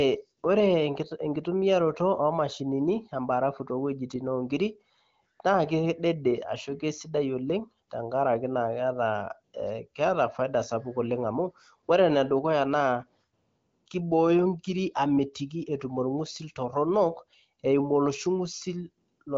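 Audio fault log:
No fault is found in this audio fault log.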